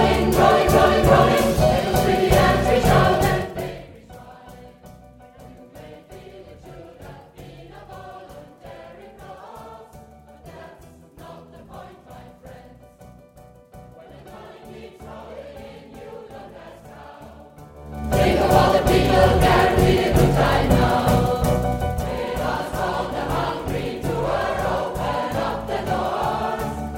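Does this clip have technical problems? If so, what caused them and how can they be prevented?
No, the signal shows no technical problems, so there is nothing here that needs to be prevented.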